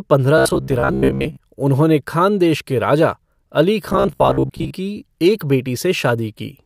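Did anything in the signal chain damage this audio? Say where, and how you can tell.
Yes, most likely at the driver or buffer stage. Robotic sound from repeated short buffers appears from 0.38 to 1.43 s, before "उन्होंने खानदेश के राजा", and from 3.90 to 4.72 s, after "खानदेश के राजा अली". About half the audio is replaced by repeated 15 ms chunks, imposing a rigid 66.7 Hz metallic buzz.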